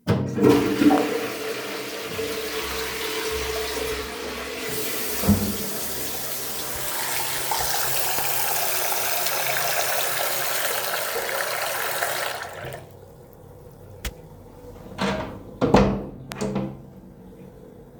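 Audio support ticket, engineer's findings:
Loud pop, three events: 0.98–1.00 s, 8.19–8.21 s, 16.32–16.34 s. Likely a voltage step or spike from a connector, switch, static discharge or driver glitch, shaped by downstream circuitry into a brief pulse. Symptom: single sharp pop each time, about 20 ms long, peaking well above the surrounding sound, around 15 dB at the first two and about 20 dB at the last. Underlying sound continues unbroken beneath each pop.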